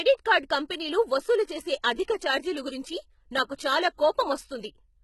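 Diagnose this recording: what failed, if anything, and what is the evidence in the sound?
The codec stage failed, and the cause is likely HE-AAC compression. The damage is heavy and runs through the whole speech clip. Nothing is present above 11.8 kHz. The upper band sounds rebuilt, not recorded. S sounds come out gritty and metallic, and harmonics fail to line up across the crossover. The codec sends only the lower spectrum and synthesises the treble by copying bands upward under a coarse envelope. The heaviness fits a very low bitrate, around 16 kbps.

There is also pre-echo, in the same codec stage, from 3.56 to 3.59 s. A short hiss of about 31 ms comes just before a sharp attack, and the attack itself sounds softened and smeared. The codec spreads quantisation noise evenly across each transform block. This attack falls late in its block, so noise sized for the loud part also fills the quiet moment before it.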